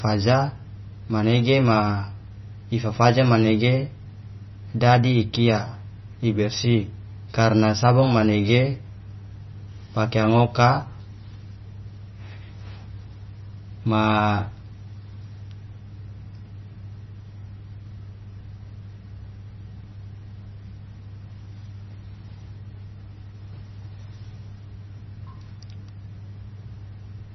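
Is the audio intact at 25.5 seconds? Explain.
No. At 25.5 seconds, as throughout the clip, the speech sounds watery and swirly, with metallic chirps on s sounds, smeared consonant onsets, and nothing above 5.9 kHz. This is likely heavy MP3 compression at a bitrate low enough to suggest roughly 23 kbps. Short of bits, the encoder cut the treble at a fixed frequency and dropped weak frequency lines that flicker on and off between frames, producing the swirling texture.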